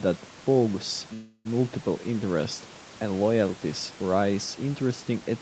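At 1.13 s the speech stalls in a call audio freeze until 1.47 s, likely packets held up until the jitter buffer ran dry. The last sound is stretched into a fading buzz or hiss for about 0.32 s, then "interests and loyalties raise" resumes intact, just that much later.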